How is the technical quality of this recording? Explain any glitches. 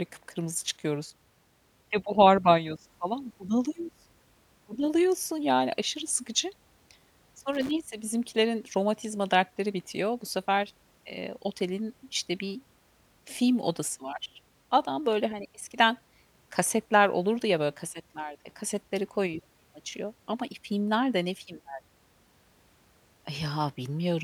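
One glitch stands out in this speech recording. From 7.53 to 7.71 s, just before "bizimkilerin romatizma dertleri bitiyor", there is loose connector crackle. A worn contact keeps making and breaking, chopping the signal for about 0.18 s. It sounds like a brief, irregular burst of scratchy crackling.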